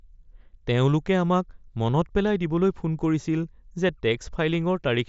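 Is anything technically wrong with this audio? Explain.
No, nothing is technically wrong with this audio.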